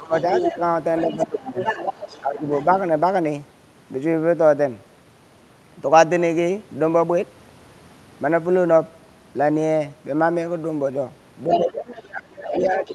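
A speech recording where, at the start and the end, a second voice can be heard underneath the talker. From 0.13 to 2.65 s and again from 11.5 to 12.92 s it comes through only slightly quieter than the main speech, around 5 dB down. This is the other side's voice leaking through, likely because the talker's loudspeaker played the far end into the microphone and the echo canceller left part of it in. In the same stretches the talker's own speech sinks. It dips by roughly 15 dB in places between 0.0 and 1.58 s, adding up to about half a second, and by about 10 dB from 2.21 to 2.44 s. From 11.65 s to the end at 12.94 s it drops much more sharply, by around 25 dB. This is speech suppressed in double talk. With both voices present at once, the canceller likely could not tell its talker apart from the echo and turned everything down together.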